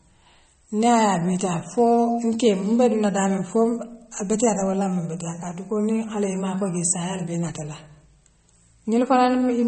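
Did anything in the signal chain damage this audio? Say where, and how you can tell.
Yes. At the codec stage, this speech shows plainly audible MP3 compression across the whole clip: nothing above 8.4 kHz, with a watery, swirling texture and metallic chirps on sibilants. The likely cause is an encoder starved of bits, consistent with a rate near 32 kbps.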